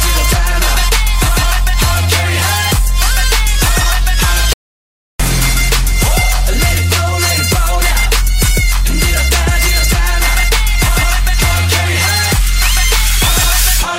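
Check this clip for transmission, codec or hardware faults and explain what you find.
There's one clear fault, an audio dropout to silence running from 4.53 s to 5.20 s. The sound cuts off mid-flow and picks up again about 0.66 s later, and that stretch is dead digital silence, with none of the room tone or background you hear on either side. Whatever was happening in that window is simply gone. The likely cause is the input briefly dropping out, from a loose connection, a failed link or an accidental mute, while the recorder kept writing silence.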